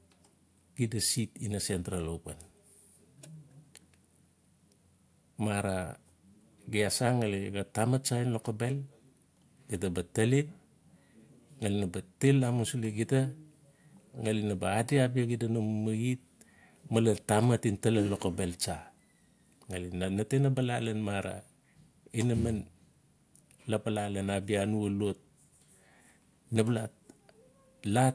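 No technical faults are audible anywhere in this recording.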